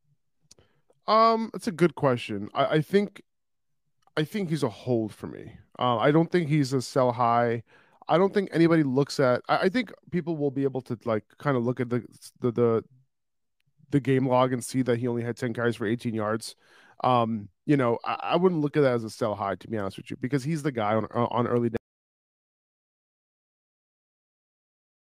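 Speech that cuts off abruptly at 21.77 s and falls into silence, with no room tone, for the final 3.4 s of the recording. It is an audio dropout to silence, likely from a lost input while the recorder kept writing silence.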